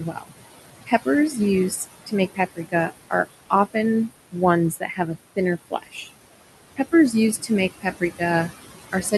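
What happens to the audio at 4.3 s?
Speech cut by the noise suppressor begins at 4.32 s and runs to 6.09 s. Across that span the suppressor mistakes parts of the speech for background and turns them down with the noise, by about 17 dB at the deepest point. In all, roughly half a second of sound is affected, so soft consonants and quieter stretches come out swallowed or faint rather than clearly spoken.

This happens on top of noise suppressor artifacts that run through the whole clip. The suppressor pulls the steady room noise, which sits about 11 dB below the speech, down by about 18 dB in the gaps. It lets that noise rise again under the speech, so the leftover noise pumps between phrases and can take on a fluttering quality. At 4.3 s that same process is cutting into the speech itself.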